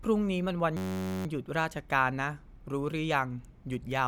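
A system hang loop interrupts this speech clip from 0.77 to 1.26 s. The computer or audio driver stalled while the sound hardware kept replaying the same stretch of its ring buffer. One 10.67 ms slice repeats about 46 times at 93.8 Hz, which fits a 512-sample buffer. Because the loop is so short, it is heard as a steady buzz rather than a stutter, and afterwards the speech resumes with next to nothing missing.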